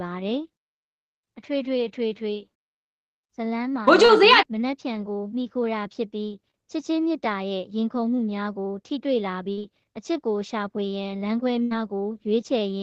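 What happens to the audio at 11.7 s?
A burst of packet loss runs from 11.63 to 11.73 s. Several consecutive packets failed to arrive in time, so the receiver stretched the last sound for about 75 ms, fading it down. Playback then resumes with roughly 80 ms of audio skipped.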